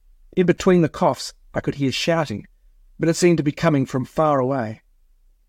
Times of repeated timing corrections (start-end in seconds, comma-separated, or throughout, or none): none